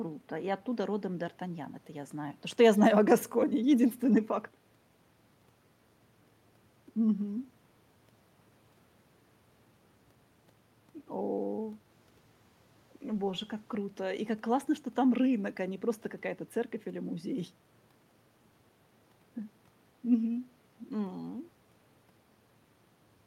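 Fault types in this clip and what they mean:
No technical faults can be heard anywhere in this speech recording. There is nothing to list for it.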